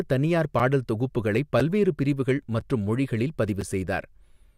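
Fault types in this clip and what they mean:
Gap between chunks: the speech is delivered in one-second pieces, and a 6.5 ms stretch of silence sits at each join where one piece ends and the next begins. No speech is lost; the stream is simply interrupted. The holes fall at 0.59, 1.60, 2.61 and 3.61 s, evenly spaced a second apart, so they come across as brief dropouts repeating on a steady beat.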